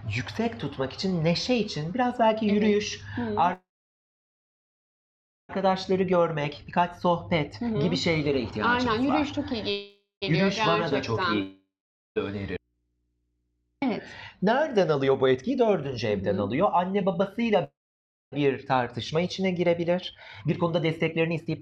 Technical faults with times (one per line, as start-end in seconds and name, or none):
3.53-5.51 call audio freeze
5.73-10.48 jitter buffer speed-up
9.71-10.24 call audio freeze
11.42-12.18 long network dropout
12.57-13.82 audio dropout to a faint residue
14.95-21.61 jitter buffer speed-up
17.64-18.34 call audio freeze